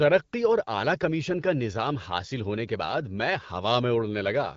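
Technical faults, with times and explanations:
No technical faults can be heard in this speech.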